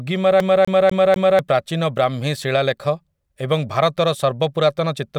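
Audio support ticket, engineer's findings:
CD stuck on one turn, 0.40–1.39 s: scratch throws laser back a track, 0.25 s loop repeats 4 times with mutes at jumps, releasing before "ପ୍ରାଚୀନ ବ୍ରାହ୍ମୀ".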